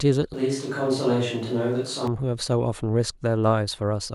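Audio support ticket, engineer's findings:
Switch to a distant microphone, 0.34 to 2.08 s. Close mic feed likely dropped, with a far mic carrying the speech instead. Sudden change to roomy, hollow, thinner-bass tone; level roughly unchanged; room noise rises to about 30 dB below speech. Abrupt return to close sound at 2.08 s.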